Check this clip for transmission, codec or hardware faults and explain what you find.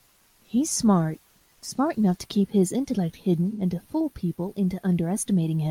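One codec fault is present in this speech clip: AAC frame loss with concealment, from 3.51 s to 3.61 s. Roughly 85 ms of coded audio never reached the decoder, which fits two consecutive AAC frames going missing. The decoder covered the gap by reusing the last good spectrum with randomised signs and estimated energy. The gap is short enough that no fade-out occurs, so it is heard as a brief smeared, noisy or phasey patch.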